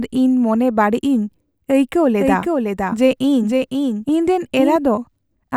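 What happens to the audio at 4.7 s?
A doubled audio track is running there, from 2.20 s to 4.76 s. A full-band copy trails the speech by roughly half a second at about 5 dB down, likely from a second, slower capture path. Unlike an echo, it has no decay or room colour and cuts off abruptly.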